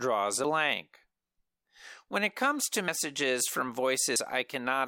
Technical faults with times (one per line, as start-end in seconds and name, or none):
2.88 dropped buffer (overrun)